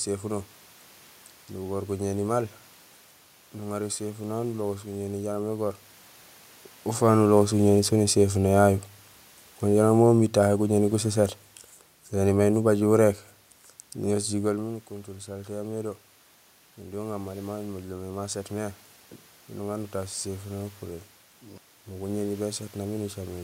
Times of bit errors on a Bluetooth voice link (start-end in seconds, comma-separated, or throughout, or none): none